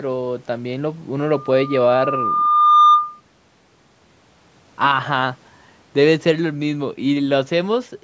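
From 1.22 s to 3.21 s, loudspeaker feedback squeal: the microphone picks up its own loudspeaker, and the loop gain exceeds one at 1.2 kHz. That tone swells over about a second and a half to roughly 10 dB above the speech before the loop breaks.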